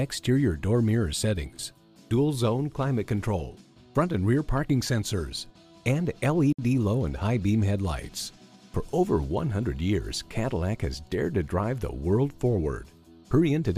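At 6.53 s the sound drops to full silence for 58 ms, resuming at 6.59 s. This is likely a Bluetooth stall, with the headphone buffer running empty while delayed packets were resent. Unlike concealed packet loss, the gap is clean silence, not smeared sound.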